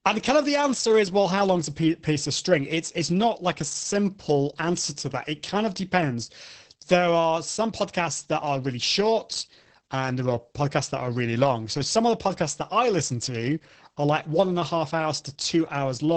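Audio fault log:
throughout: Opus voice compression. The speech sounds muffled, hoarse and somewhat robotic, with nothing heard above about 8 kHz. This fits Opus in its wideband SILK mode at a very low rate, around 10 kbps. The linear-prediction coder keeps the vocal-tract envelope but codes the excitation so coarsely in each 20 ms frame that the voicing turns rough and buzzy. A plain low-pass filter would dull the top without that grainy, synthetic texture, and MP3-style artefacts would add swirly, metallic warbling instead.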